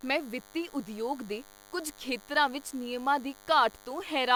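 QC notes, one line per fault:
Throughout, DECT cordless phone buzz: thin 100 Hz buzz rich in harmonics sits roughly 25 dB under the speech, from rectified radio bursts every 10 ms, not mains hum.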